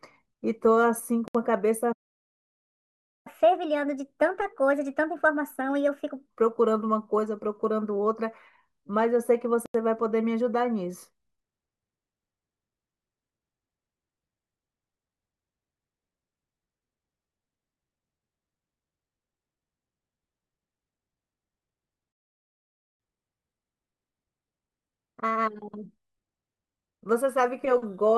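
At 1.28 s and again at 9.66 s the speech drops to silence for 67 ms and 85 ms, then resumes, most likely a Bluetooth stall where interference delayed packets and the headphone buffer ran dry. From 1.92 to 3.27 s, and from 22.12 to 23.00 s, the speech halts mid-flow for 1.33 s and 0.86 s. These are likely playback stalls, with the player starved of data or blocked. After each stall comes catch-up at higher speed. Speech runs 1.25 times fast and roughly four semitones sharp from 3.27 to 6.27 s, then 1.1 times fast and about a semitone and a half up from 23.00 to 26.00 s, as the backlog is resampled away.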